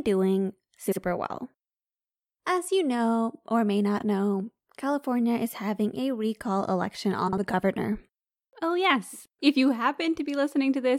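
A brief garbled flutter breaks the speech three times: at 0.87 to 0.97 s, 3.98 to 4.03 s and 7.28 to 7.38 s. These are frames out of order. Two adjacent runs of audio were decoded swapped, so each stretch plays with its halves exchanged. The swapped blocks are 46.4 ms, 23.2 ms and 46.4 ms long, which fits frames of about 23 ms each. No time is lost.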